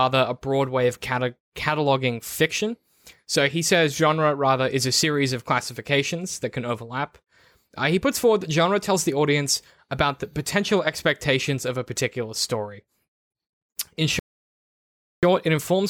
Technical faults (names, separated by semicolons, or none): bit error spike; rebuffering stall